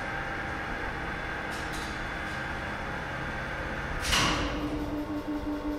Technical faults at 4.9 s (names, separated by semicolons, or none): none